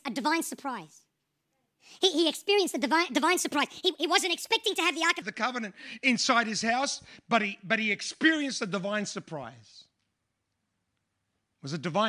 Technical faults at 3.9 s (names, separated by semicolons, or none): wrong sample rate